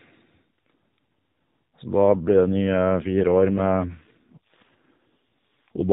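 AMR rate drop, 2.04 to 5.89 s: the speech turns rougher and more synthetic with no gap, consistent with the codec stepping down from 12.2 to 4.75 kbps.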